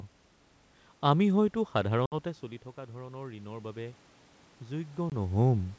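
Speech clip over a G.722 call with two faults. Packet loss on the ADPCM call drops about three packets (60 ms) at 2.06–2.15 s, between "আমি হয়তো" and "চলি থকা", and about one packet (20 ms) at 5.10–5.12 s. Each loss leaves a hard-edged hole of silence, and the speech comes back slightly distorted until the decoder's predictor and step size realign within some tens of milliseconds. Automatic gain rising follows the input dropping about 14 dB. From 2.96 to 4.07 s, after "চলি থকা", the gain control lifts its gain by about 5 dB, so voice and room noise swell up together over roughly a second.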